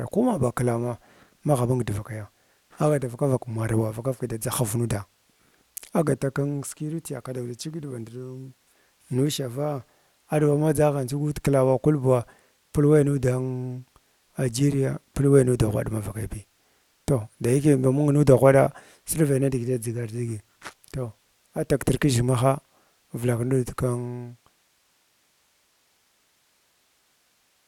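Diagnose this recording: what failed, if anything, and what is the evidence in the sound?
Nothing failed here: the level easing down from around 23.5 s to silence at 24.95 s is just a deliberate smooth fade-out, the way an editor would finish a clip.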